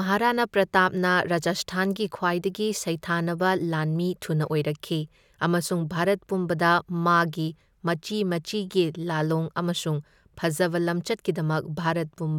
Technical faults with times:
none

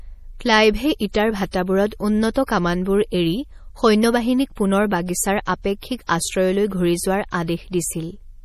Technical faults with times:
0.00-8.44 MP3 compression

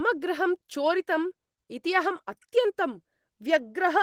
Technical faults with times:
none

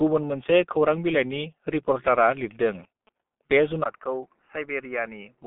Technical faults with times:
0.00-5.47 G.723.1 codec
2.14-3.09 GSM signalling bursts
3.84-5.47 input switched to a poorer device

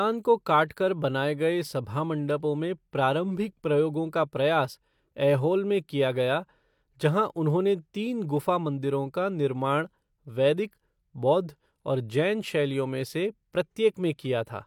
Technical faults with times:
none

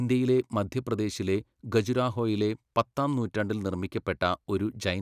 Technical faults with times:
none

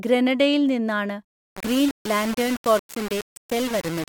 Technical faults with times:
1.25-4.08 low bit depth without dither

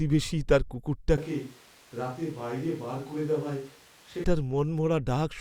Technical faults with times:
1.18-4.24 switch to a distant microphone

